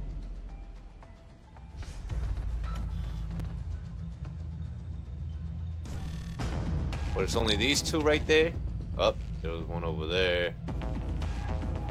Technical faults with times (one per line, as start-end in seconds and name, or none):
3.40 gap between stream segments
7.40 gap between stream segments